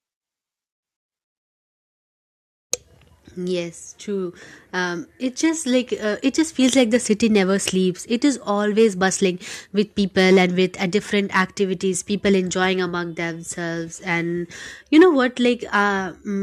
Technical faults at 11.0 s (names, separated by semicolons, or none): none